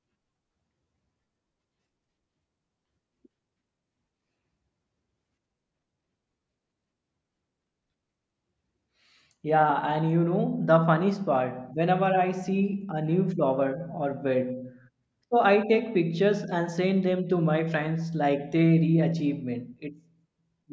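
No technical faults can be heard anywhere in this recording.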